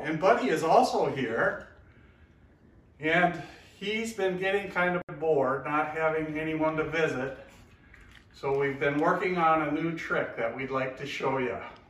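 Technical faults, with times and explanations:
5.02 to 5.09 s, gap at a join of encoded pieces: the sound drops out for about 69 ms, then resumes exactly where it stopped. Nothing is lost. Silence is inserted. The audio was encoded in separate parts and joined without trimming. The encoder's start-up delay and the padding on the last frame both remained at the seam. The codec smears the edges of the gap.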